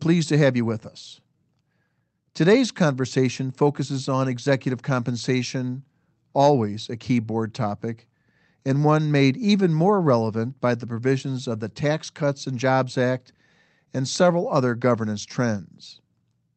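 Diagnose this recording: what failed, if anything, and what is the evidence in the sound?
Nothing has gone wrong here: the speech comes through the call path as you'd expect, with the top end stopping around 8 kHz, which fits a 32 kbps Opus stream, and nothing in the sound suggests a failure at any stage.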